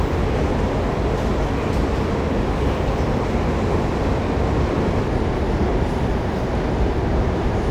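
From the start to 5.08 s, the audio runs hurried and sits about two semitones sharp, then drops abruptly to its natural speed and pitch. This is a section at the wrong speed, playing 1.13 times too fast, likely from being fitted to the wrong clock.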